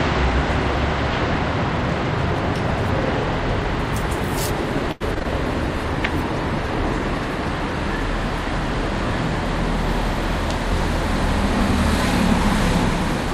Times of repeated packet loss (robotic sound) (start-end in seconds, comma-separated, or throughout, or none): 4.91-5.26